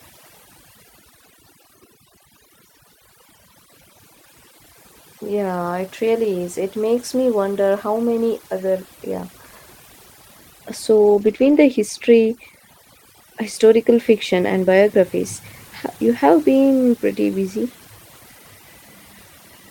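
Throughout, overdone noise removal gates individual frequency bands whenever they near the noise estimate, leaving twinkling specks over near-silence, unlike broadband hiss or plain low-pass dulling. From 10.97 to 11.55 s, just before "the history", a lost packet rebuilt from error correction plays rough, noisier low-bitrate copies with no gap, which tells it apart from concealment or a dropout.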